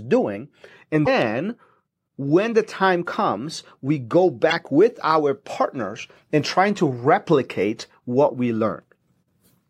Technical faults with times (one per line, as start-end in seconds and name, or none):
1.03-1.08 damaged data in a compressed stream
4.48-4.53 damaged data in a compressed stream